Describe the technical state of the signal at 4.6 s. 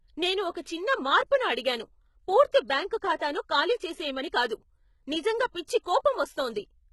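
At 4.6 s, as across the whole clip, the speech carries heavy damage that's likely HE-AAC compression at a low bitrate, around 16 kbps by the sound. The treble above the core band is rebuilt by copying lower bands upward, so s sounds come out gritty and lispy, and nothing sits above about 11.8 kHz.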